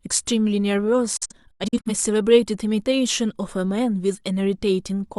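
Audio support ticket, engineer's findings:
Speech cuts out in several short holes between 1.17 s and 1.91 s: a digital broadcast dropout. Probable component is the receiver/decoder muting on lost or checksum-failed frames. About 256 ms of silence is spread over roughly 680 ms, fitting about six lost frames. The longest hole is 85.3 ms, and each mute fades within 8 ms. The content in the gaps is unrecoverable.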